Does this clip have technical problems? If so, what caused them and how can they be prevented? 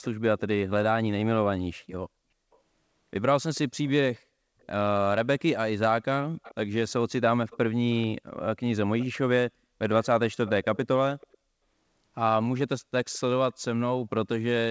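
Yes. The far end of this call most likely played the audio on a loudspeaker, and its echo canceller failed to remove everything its microphone picked up, so an echo leak returns a delayed copy of the speech about 439 ms late. Scraps and stretches of it can be heard at 0.02–0.4, 2.52–2.58, 3.55–4.66, 6.43–6.92, 7.5–8.07, 8.99–9.06 and 10.03–11.38 s. The echo sits about 20 to 35 dB below the speech, clearest near 6.43 and 10.03 s. The whole clip is band-limited to 8 kHz by the wideband call path. Using a headset at the far end, or tuning its echo canceller for a delay of this size, would prevent the echo leak.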